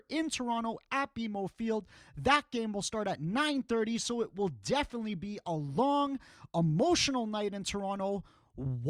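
Nothing in this speech recording stands out as a technical fault, so there's really nothing here to flag.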